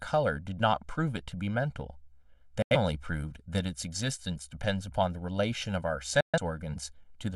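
Right from the start the speech sounds hollow and a bit phasey. That's channel delay (comb filtering): one side runs roughly a millisecond and a half late, so summing to mono carves evenly spaced notches, the first around 400 Hz, all the way through.

Then there's a digital broadcast dropout at 2.62 to 2.76 s, where the audio fades out over about 3 ms and goes silent, which fits two lost frames. The receiver mutes until clean data returns. The second, at 6.21 to 6.39 s, is longer and fits three frames.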